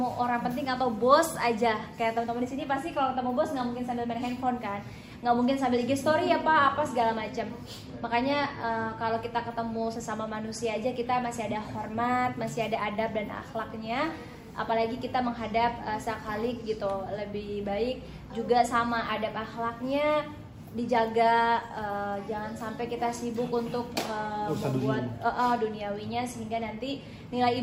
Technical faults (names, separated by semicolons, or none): none